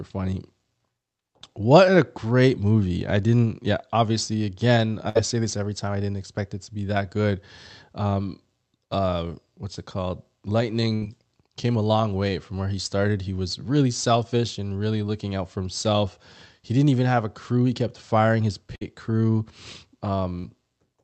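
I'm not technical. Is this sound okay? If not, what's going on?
No. There are three bursts of packet loss: at 5.09–5.17 s, after "didn't yeah obviously again"; at 10.95–11.03 s, before "came a long way"; and at 18.75–18.83 s, after "kept firing his". Each time the call briefly stretches the last sound into a fading buzz or hiss and then skips ahead, so a fraction of speech is gone.

At 20.41–20.45 s, a short concealed packet loss makes a quick smear or wobble where a tiny piece of audio went missing and was patched over.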